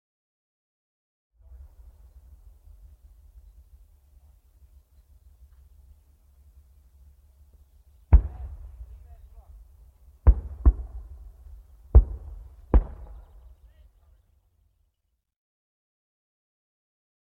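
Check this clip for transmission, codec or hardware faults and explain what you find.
Nothing stood out on listening, and the smooth fade-in near the start, rising gently from around 1.5 s to full level by 1.72 s, is an ordinary editing touch.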